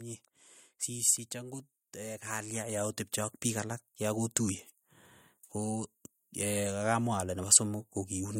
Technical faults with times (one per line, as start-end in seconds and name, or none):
0.86-4.43 automatic gain rising